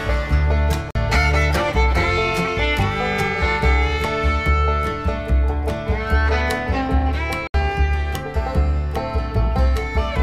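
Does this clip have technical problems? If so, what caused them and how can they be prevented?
Yes. The audio cuts out twice, at 0.91 to 0.95 s for about 46 ms and at 7.47 to 7.54 s for about 70 ms. Each gap is silent, and the sound resumes further along as if it had kept playing. This is likely a Bluetooth dropout: audio packets reached the headphones too late and were discarded, and the gap lengths fit two and three lost packets. Keeping the devices close and away from Wi-Fi interference prevents it.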